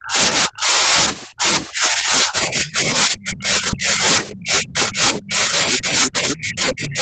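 The opening speech dips sharply from 0 to 0.17 s, by as much as about 40 dB, then sags again from 0.48 to 0.94 s by about 25 dB. From 1.27 s to the end it keeps thinning and ducking, up to about 30 dB down. This is speech suppressed in double talk. The likely cause is an echo canceller that could not tell the talker from loudspeaker echo while both sides spoke, so it turned everything down.

Faint scraps of a second voice surface at 1.21 to 1.26 s, 2.66 to 2.71 s, 3.12 to 3.23 s and 5.21 to 5.25 s. They sit about 20 to 30 dB below the speech. A longer, much plainer stretch follows from 5.72 to 6.39 s at only about 10 dB down. This is the other side's voice leaking through, likely loudspeaker playback that the echo canceller failed to remove from the microphone signal. The whole clip, leak included, is band-limited at 8 kHz by the call path.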